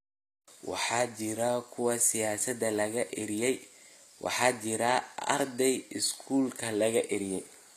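Speech whose treble sounds gritty and lispy throughout, with metallic s sounds and high harmonics that don't line up, likely from HE-AAC compression rebuilding the upper spectrum by band replication, consistent with a low bitrate around 24 kbps.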